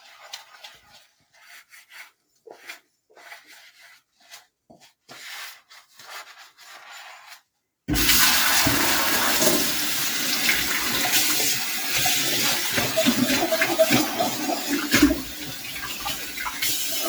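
Noise suppressor applied to music or sounds, throughout: a speech-tuned suppressor treats steady tones and tails as noise, so levels swing by around 10 dB and held sound pumps and thins.

Sound cut by the noise suppressor, 0.77 to 1.92 s: sustained parts sink by up to about 10 dB for roughly 0.7 s in total, while sharper onsets still come through.

Lost LE Audio frames, 6.88 to 6.90 s and 9.998 to 10.02 s: each gap of 20 ms, which fits two missing 10 ms frames, is filled by the LC3 decoder repeating the last spectrum with random signs, so a brief noisy smear replaces any tone. The same happens in single 10 ms losses at 12.53 s and, later, at 15.75 s.

Sound cut by the noise suppressor, 14.06 to 14.94 s: steady and decaying sound drops by up to about 8 dB, and tails are cut short over roughly 0.7 s.

Sound cut by the noise suppressor, 15.14 s to the end: the suppressor pulls held sound down by up to about 10 dB for roughly two seconds. 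The 10 ms frame-loss smear at 15.75 s falls inside this stretch. Light lossy compression is also present, with only slight codec damage.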